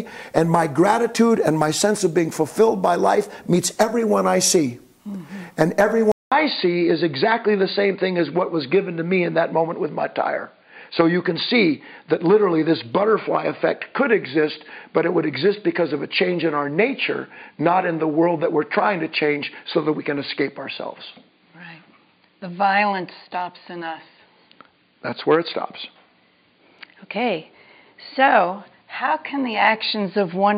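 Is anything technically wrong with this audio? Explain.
Yes. At 6.12 s a 200 ms silence is followed by duller sound with nothing above 4.7 kHz and new low-level noise. The input likely switched to a poorer device with a narrower band.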